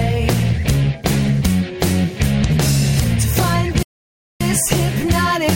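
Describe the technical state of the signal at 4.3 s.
At 4.3 s the output is dead silent, partway through a gap that cuts the sound off mid-flow from 3.83 s to 4.41 s, roughly 0.58 s. It is a playback stall, likely caused by the player running out of buffered data or its thread being blocked until it recovered.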